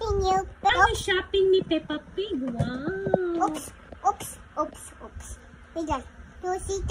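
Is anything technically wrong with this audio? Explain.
Yes, there are two related faults close together near the start.

At about 0.69 to 0.71 s there is a skip ahead. Roughly a second of audio was dropped, either in transit or by a jitter buffer discarding material when it overflowed, and playback jumps forward with nothing filled in. The sound on either side is butted together almost directly. That is what separates it from a dropout: there is no silence, no noise fill and no stretched concealment, just an abrupt jump.

From about 0.84 to 1.98 s a jitter buffer speed-up follows. Once the backlog built up, the receiver trimmed short slices of one or a few pitch periods many times in a row, removing around a tenth of a second in total. The audio runs at about 107 % of normal speed and sounds slightly hurried. The pitch stays unchanged, which distinguishes this from a sample-rate or resampling error, where speed and pitch would rise together.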